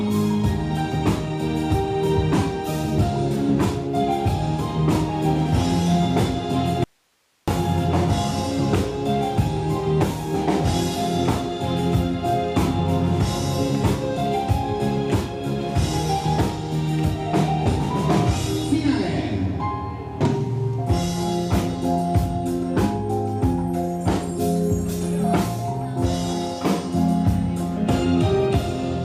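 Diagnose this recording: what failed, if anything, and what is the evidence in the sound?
Audio dropout to a faint residue, 6.84 to 7.48 s: the signal cuts abruptly to hiss about 45 dB down, likely an intermittent analogue connection upstream.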